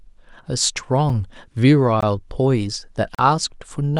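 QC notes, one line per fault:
1.09 s: block of digital silence, about 6 ms of samples zeroed mid-speech; the abrupt drop and return with no fade make a single tick.
2.01–2.03 s: block of digital silence, 20 ms of zeros, likely where output wasn't filled in time; the hard cut is heard as a brief pop.
3.15–3.19 s: block of digital silence, a 40 ms run of zeros; the unfaded cut and restart leave a short, audible hole.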